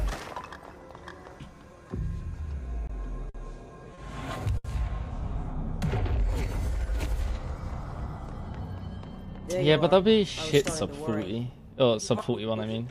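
Short stalls from a late packet at 2.87, 3.29, 3.94 and 4.57 s: the jitter buffer ran dry, so the last sound is held for 20, 50, 30 and 70 ms, then resumes with nothing lost.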